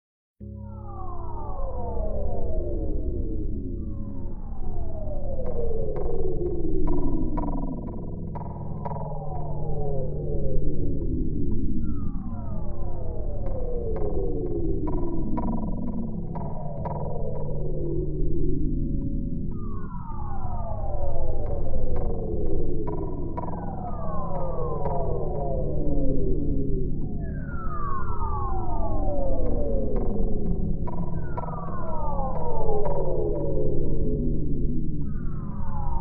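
No faults detected anywhere in the recording.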